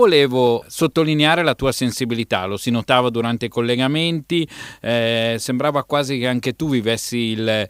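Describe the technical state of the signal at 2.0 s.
At 2.0 s you're inside a run of periodic USB or driver dropouts, running from 0.47 to 7.47 s. About once a second the bus or driver stalls and a tiny sliver of the speech gets skipped, well under a millisecond each time, leaving about seven small regular ticks.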